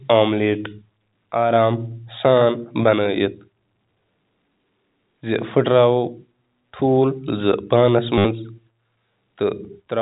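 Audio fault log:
8.18–8.25 s, packet loss with last packet repeated: 70 ms goes missing and the receiver keeps replaying the last packet until fresh audio arrives. The repeats ignore the pitch, so you get a buzzy robotic stutter near 100 Hz, which fits 10 ms packets.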